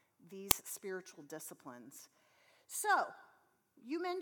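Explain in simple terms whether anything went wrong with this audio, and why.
An uninitialised buffer shows up at 0.51 s as a loud crack lasting about 5 ms. The player sent out a chunk of audio before any sound had been written into it, so leftover junk in memory was played as if it were sound.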